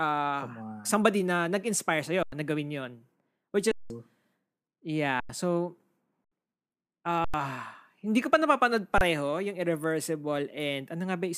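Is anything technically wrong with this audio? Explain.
Yes. This speech clip has repeated underruns with held samples. The output buffer ran dry six times, at 2.23–2.32, 3.72–3.90, 5.20–5.29, 6.25–6.32, 7.25–7.34 and 8.98–9.01 s. Each time the converter froze on its last value, so the waveform flattens and the speech cuts out abruptly with almost no click. The 93 and 186 ms gaps fit buffers of 4096 and 8192 samples. Live audio was lost during each hold, from a few hundredths to about two tenths of a second, so the speech picks up later than where it stopped.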